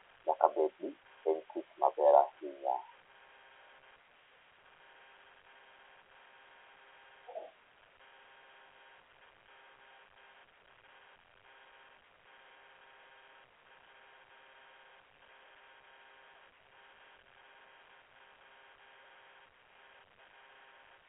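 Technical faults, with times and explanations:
No technical faults can be heard anywhere in this recording.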